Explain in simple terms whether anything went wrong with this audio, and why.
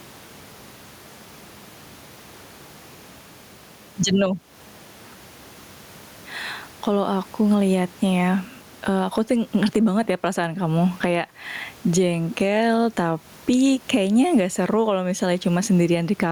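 Gain pumping runs through this speech, likely from a limiter fighting mic gain set far too high.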